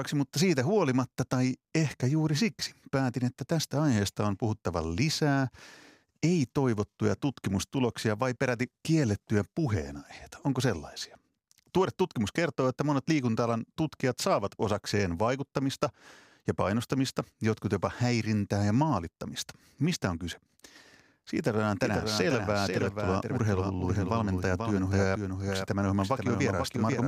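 From 21.83 s to the end, a doubled audio track appears: a clean, full-band copy of the speech arrives about half a second behind, a few dB quieter, switching on abruptly, likely from a second, slower capture path.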